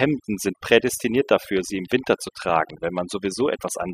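Overdone noise removal runs through the whole clip. The noise reduction was set so hard that frequency bands near its noise estimate are pulled down or cut entirely, taking quiet parts of the speech with them. Pauses fall to near silence with twinkling specks.

A train of clicks begins at 0.88 s and continues to the end. Evenly spaced pulses arrive about 7.2 times per second, roughly twenty in all, peaking a few dB above the speech. This is likely interference from nearby equipment or a faulty connection or power supply, and it is heard as steady ticking over the voice and through its pauses.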